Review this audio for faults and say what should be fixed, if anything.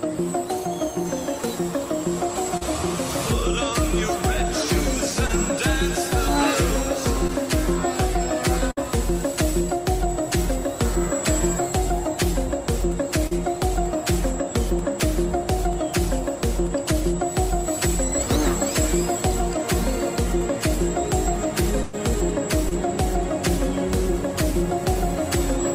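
Short concealed packet loss at 2.57 to 2.63 s, 5.27 to 5.31 s, 13.27 to 13.33 s and 22.69 to 22.73 s. Each hole, 20 to 40 ms, was patched by continuing the last sound.

Scattered short gaps between 7.27 and 8.81 s. About four small losses were each filled by extending the preceding sound. The longest is roughly 50 ms, and about 80 ms is missing in total.

A burst of packet loss at 21.83 to 21.95 s. About 100 ms went missing. The receiver carried the last sound forward and faded it before real audio resumed.

A steadier network path with a deeper jitter buffer, or added redundancy such as forward error correction, would keep these packets from being lost or arriving too late.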